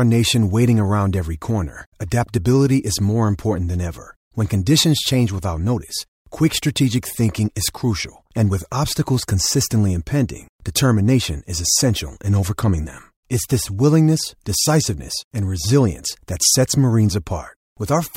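Nothing goes wrong at any point in this speech recording, so there's no fault to walk through.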